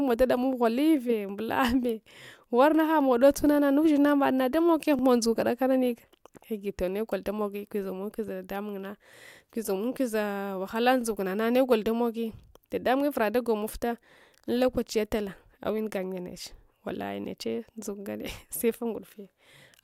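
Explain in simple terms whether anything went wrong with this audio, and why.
Overlapping chunks cause small stutters in this speech at 4.99–5.01, 11.01–11.03 and 17.03–17.05 seconds. The audio was handled in pieces about 6 seconds long, and each new piece began slightly before the previous one had finished. At every join, about 21 milliseconds of sound plays twice, so you hear a brief click or hiccup that comes back at the same steady interval.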